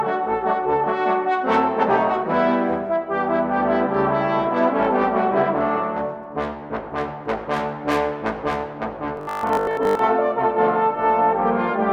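Between 9.17 and 10.01 s the audio takes on robotic sound from repeated short buffers: a rigid, metallic 50 Hz buzz as most of the passage is replaced by repeats of a 20 ms segment, likely because new audio arrived too seldom and playback filled the gaps.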